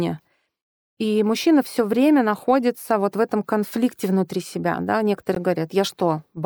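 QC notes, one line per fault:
5.35 s, gap at a join of encoded pieces: right after "конфликте внутри себя да" the speech drops out for about 16 ms and then resumes where it stopped. Two separately encoded segments were joined untrimmed, so encoder delay and final-frame padding leave a brief silence with smeared edges.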